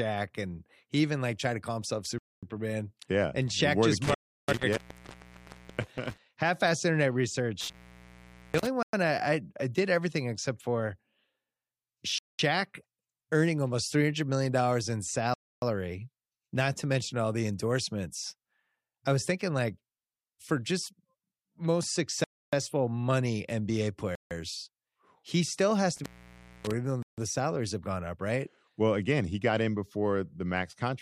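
Just after "tried to call himself", the speech drops to clean silence for 0.24 s at 2.18 s, then resumes where it stopped. That is a Bluetooth stall, likely interference delaying packets until the headphone buffer ran dry. It recurs at 4.15, 8.83, 12.18, 15.34, 22.24, 24.15 and 27.03 s (the last after "even though", before "salaries have gone up"), with gaps of 0.11 to 0.34 s. Overlapping the second stall, intermittent contact spans 4.04 to 6.18 s: a loose connection opens for about 1.0 s, cutting the signal with crackle at each edge and leaving faint hiss. It repeats from 7.61 to 8.67 s (0.81 s open) and from 25.96 to 26.74 s (0.59 s open), between "he still has" and "even though".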